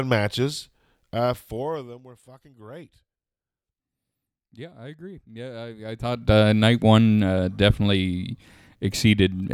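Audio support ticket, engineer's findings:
Zipper noise, 1.11–2.05 s and 5.80–6.32 s: ticking on gain ramps, roughly 25 dB down then up in 2 dB unsmoothed steps, about 15 then 30 per second. Gain stage not interpolating.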